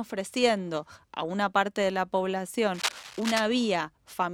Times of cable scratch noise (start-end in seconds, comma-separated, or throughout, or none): 2.74-3.41